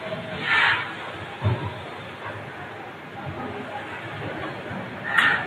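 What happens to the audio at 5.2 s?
At 5.2 s the speech is caught in a feedback echo between two devices, which runs from 3.34 s to the end of the clip. A second device in the room is replaying this microphone's signal, and the microphone picks it up again where no echo canceller can remove it. Each syllable returns roughly every 400 ms, thinner and ringing, peaking about 19 dB below the speech. On a spectrogram this shows as faded copies of each syllable repeating at regular intervals; on the waveform, as evenly spaced smaller bursts.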